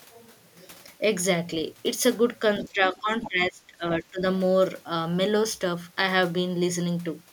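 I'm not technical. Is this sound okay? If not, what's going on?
No. At 2.58 to 2.68 s and 3.22 to 3.29 s, faint scraps of a second voice come through: the other side's voice leaking through, likely left over from incomplete echo cancellation. The main speech also dips noticeably at 2.64 to 3.09 s, 3.27 to 3.84 s and 4.0 to 4.22 s. This is speech suppressed in double talk, likely because the echo canceller turned everything down while both sides spoke. The dip at 3.27 s is the deepest.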